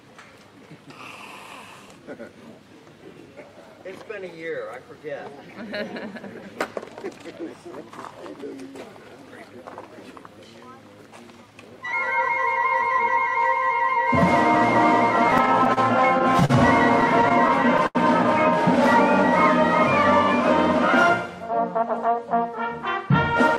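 Between 15.31 and 15.79 s, packets arrived late and the jitter buffer kept running dry, causing repeated stalls (stutter): four brief holds of the preceding sound, the longest 31 ms, make the audio drag. At 16.45 s a single late packet caused a short stall, stretching the last sound by 42 ms before it resumed where it left off, leaving a held moment with a faint buzz or dip. From 17.01 to 17.97 s the stutter returned more heavily, with seven holds, the longest 80 ms, filling 137 ms in all, so the audio limps and hesitates. From 21.51 to 22.64 s a jitter buffer speed-up trimmed about 50 ms of excess buffered audio in small pitch-period cuts, making the sound run 4% fast at unchanged pitch.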